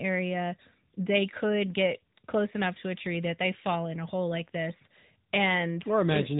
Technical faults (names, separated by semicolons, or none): AMR narrowband mobile codec; pre-emphasis left on